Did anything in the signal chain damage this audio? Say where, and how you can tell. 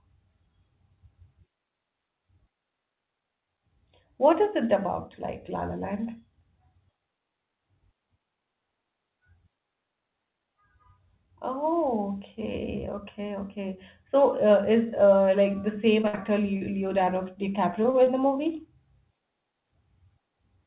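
Yes. Network packet loss, burst: just after "uh like the same", 16.08–16.15 s loses about 60 ms, concealed by continuing the last sound and fading it; spectrograms show the continued sound decaying.

Network short concealed packet loss at 16.02, 16.15, 16.57, 17.05, 17.83, 17.90 and 18.04 s. Each gap is 20–40 ms, extrapolated into brief smears or wobbles, visible as blurred waveform patches within the 4 kHz G.711 band.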